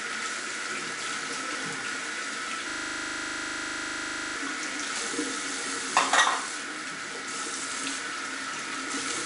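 From the start, the whole clip carries 4-bit ADPCM compression. Each sample is coded as a coarse step from a prediction, so a gritty hiss rides on every loud sound and sharp attacks distort. Nothing reaches above 10.6 kHz, which fits a stream of about 88 kbps.

From 2.70 to 4.36 s a system hang loop takes over. The system froze while the audio hardware kept replaying one 40 ms stretch of its buffer, about forty times in a row. At 25 repeats per second this comes through as a rapid, rattling stutter.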